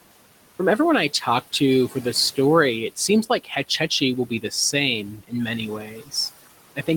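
From the start, you can hear noise suppressor artifacts running the whole way through. The suppressor is pulling down whatever bands it reckons are steady noise, by about 17 dB, so the room noise, which sits roughly 18 dB under the speech, dips away in the gaps and creeps back in under each phrase.

Then at 5.81 to 6.13 s there's speech cut by the noise suppressor. For about a third of a second it mistook part of the speech for noise and turned it down along with the background, by up to about 14 dB at the deepest point. The quieter sounds in that stretch come out swallowed and faint.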